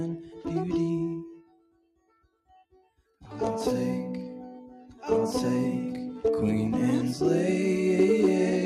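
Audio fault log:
throughout: noise suppressor applied to music, level pumps and sustains thin as a speech-tuned suppressor treats held tones and tails as noise, swinging roughly 15 dB.
0.19–0.46 s: sound cut by the noise suppressor, a brief sag of about 9 dB as the suppressor mistakes steady music for noise and ducks it.
1.22–3.23 s: sound cut by the noise suppressor, sustained material sinks for around 1.5 s in total, dropping by up to about 22 dB while attacks still get through.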